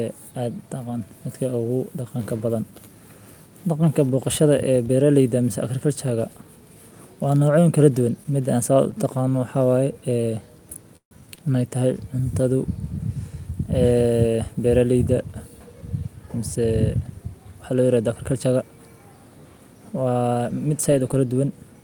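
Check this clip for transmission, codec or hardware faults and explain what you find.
Two network-delay faults sit close together in this speech, both in the second half of the clip and neither losing any audio.

From 10.97 to 11.14 s there is a call audio freeze. The last sound is carried on as a fading buzz or hiss, then about 110 ms of silence, before speech resumes exactly where it stopped. The likely cause is delayed packets draining the jitter buffer, which adds roughly 145 ms of delay. The silence sets it apart from a stall.

From 11.35 to 11.40 s comes a short stall from a late packet. One sound is stretched for about 24 ms with a slight buzz or dip while the receiver waits, then speech carries on with nothing lost. It is much briefer than the freeze and never drops to silence.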